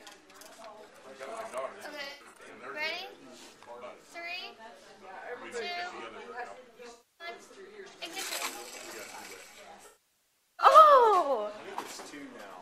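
AAC frame loss with concealment occurs at 2.07–2.39 s, 6.92–7.27 s and 9.86–10.66 s. The decoder rebuilds missing frames from the last good spectrum, so the first two patches sound smeared and phasey, while the last, about 0.7 s lost, sinks toward silence before fading back.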